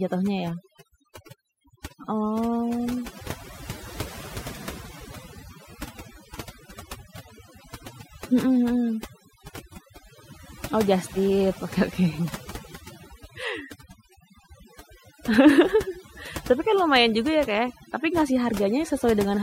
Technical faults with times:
0.00-19.42 overdone noise removal

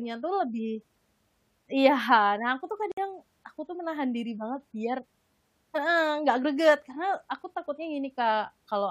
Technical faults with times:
2.92-2.97 gap at a join of encoded pieces

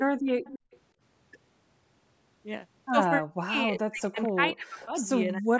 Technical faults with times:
0.00-0.23 speech suppressed in double talk
0.25-0.79 echo leak
0.59-0.71 background gated by the echo canceller
3.19-5.60 speech suppressed in double talk
4.81-4.85 echo leak

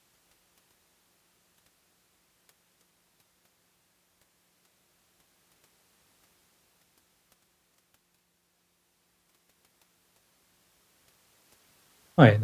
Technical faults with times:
none

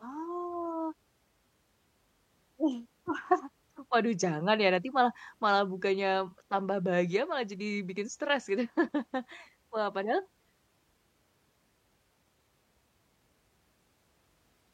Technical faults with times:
none

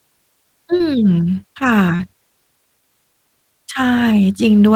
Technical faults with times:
0.77-0.82 short concealed packet loss
1.96-2.01 short concealed packet loss

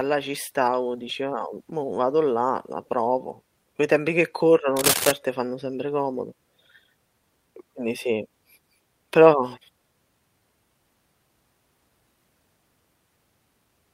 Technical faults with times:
1.05 lost packet rebuilt from error correction
4.76-5.11 cable scratch noise

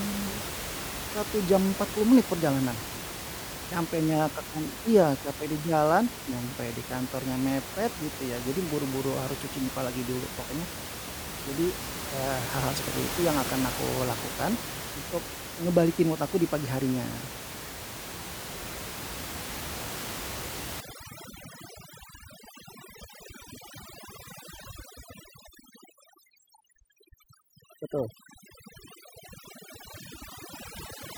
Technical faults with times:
20.80-31.18 overdone noise removal

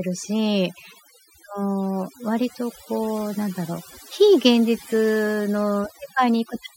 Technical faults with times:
0.00-6.77 overdone noise removal

